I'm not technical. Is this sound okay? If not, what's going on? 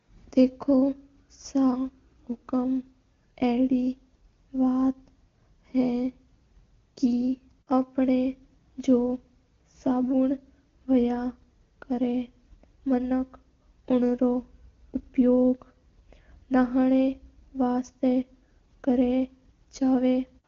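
Yes, nothing stood out as wrong when listening to this speech recording.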